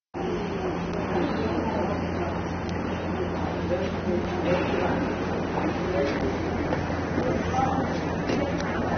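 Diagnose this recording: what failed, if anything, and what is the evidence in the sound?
Low-bitrate AAC compression at the codec stage is the likely cause of the clip sounding dull, smeared and plainly damaged throughout, with nothing above 6.3 kHz, which fits roughly 24 kbps.

Bit error spikes, flipped bits on a digital link or in storage, make sample values jump and return, producing sharp broadband ticks at 0.94, 2.69 and 8.61 s.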